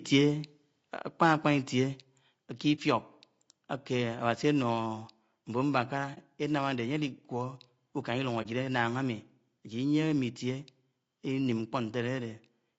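Throughout the speech there is low-delay AAC compression: the voice sounds rough and grainy, with noise filling the gaps between harmonics and a thin, synthetic top band. This is likely AAC-ELD's short frames coding pitch poorly, fitting a bitrate near 32 kbps. A spectrogram shows smeared, hazy harmonic stripes.

At 1.02 s the microphone volume is stepped down by about 2 dB, likely the call software reducing input gain in one move. Voice and background drop together, and the waveform envelope shrinks abruptly at that instant.

From 1.22 to 1.49 s there is microphone overload: peaks exceed the converter's limit by about 2 dB, likely from excessive input gain, so roughly one percent of samples are flattened. It adds a harsh crackle, seen as squared-off waveform tops.

At 2.04 s the microphone volume steps down again, by about 3 dB, presumably the same automatic gain reaction. The level falls suddenly, and the waveform shows a second clean downward step in amplitude.

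AAC frame loss with muting occurs at 2.75, 6.14 and 8.42 s. Each time one frame is lost and the decoder silences about 30 ms, fading out and back in. A spectrogram shows brief, soft-edged vertical gaps.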